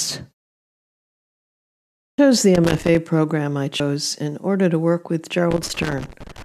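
At 2.01 s, after a 1.76 s pause, the sound returns with its first 0.17 s missing. This is a clipped start after a pause: the output path went to sleep in the silence and took that long to wake. The onset is bitten off.

From 2.55 to 2.97 s, just before "program I", an irregular scratchy burst of loose connector crackle breaks in. A worn contact is making and breaking, chopping the signal. It is rough and uneven, not a single clean click.

At 3.79 s, between "program I" and "in order to work", the audio jumps ahead by about a tenth of a second. That is compressed frames skipped, which fits four 24 ms frames lost in decoding.

After "order to work with", the crackle returns from 5.51 to 6.42 s. Inside it, at 6.15 s, a second frame skip drops about 150 ms, roughly seven frames.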